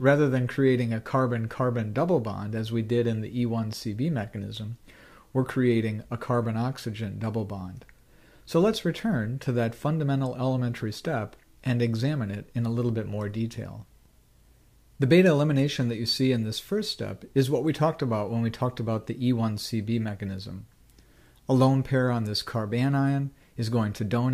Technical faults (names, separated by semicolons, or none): none